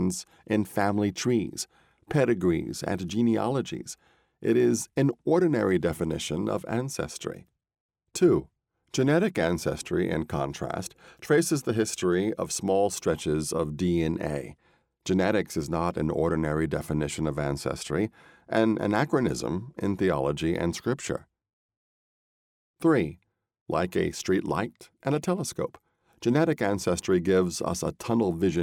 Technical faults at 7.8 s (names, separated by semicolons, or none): none